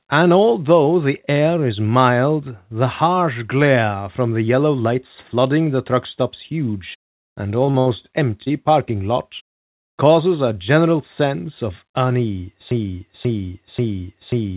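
At 7.66 s and again from 7.71 to 7.76 s there are two short concealed packet losses, close together, right after "truck stop's huge and". Each time about 20 ms of audio failed to arrive. The receiver bridged the holes by extending the last sound, for 13 ms and then 26 ms, before blending back in. The result is a quick smear or wobble.

A burst of packet loss follows from 7.80 to 7.88 s. About 60 ms went missing in one stretch. The receiver stretched the preceding sound over the gap and let it fade, so a short held buzz or dying hiss stands in for the lost audio. Playback then jumps ahead.

At 8.44 to 8.51 s, just before "parking lot causes a", another short concealed packet loss occurs. About 20 ms was lost, and 23 ms of invented sound covers it. A further 14 ms of real audio disappears as the receiver catches up. Part of a sound can seem to drop out.

From 12.71 s to the end, a broken-record loop takes over. 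A fragment about 537 ms long repeats exactly, back to back, until the clip stops. The likely cause is a stall in the player or stream, which kept resending the last piece it held. Whatever should have followed is gone.

Throughout, the call path's band limit is audible: nothing above 4 kHz, consistent with G.711 mu-law.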